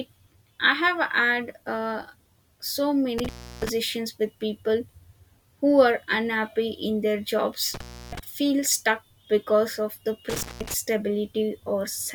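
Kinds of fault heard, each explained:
Intermittent contact: a loose cable or plug in the signal chain briefly broke connection three times, so the speech cuts out for about 0.33, 0.31 and 0.18 s with crackle at each edge and faint hiss in the gaps, after "had uh so", "are unhappy in their" and "stuck because of the".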